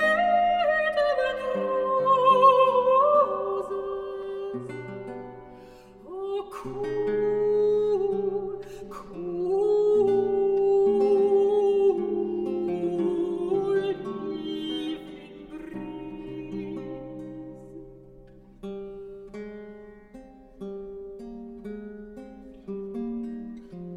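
Hollow and phasey for its whole length, the audio carries a fixed set of notches that never move with the content. This is channel delay (comb filtering): one channel trails the other by around 5 ms, and when the two are summed to mono, anything common to both cancels at evenly spaced frequencies. The first dip falls near 100 Hz, with further notches repeating up the spectrum about every 200 Hz.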